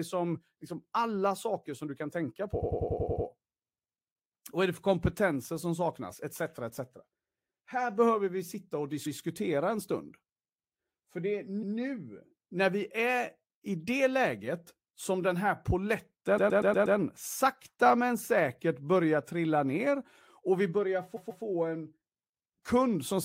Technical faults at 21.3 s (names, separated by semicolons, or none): repeated frames